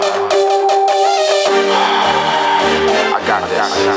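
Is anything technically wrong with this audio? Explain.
Yes, there is gain pumping throughout the clip. The likely cause is input gain set far too high, with a fast limiter or compressor clamping down on each loud sound. The gain swings by around 15 dB, leaving the audio squashed. The band-limited top end near 8 kHz is normal for the call's microphone processing.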